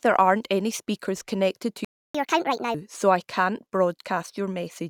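At 1.85 s, just after "any speakers connected to", the speech cuts to silence for about 0.3 s, until 2.15 s. This playback stall most likely comes from the player running out of buffered data or its thread being blocked, leaving nothing to output until it recovered.

From 2.15 to 2.74 s the player works through its backlog in a catch-up at higher speed, resampling to 1.5 times normal rate. Speech comes out hurried and raised by roughly seven semitones, then returns to normal speed and pitch before "so I can't".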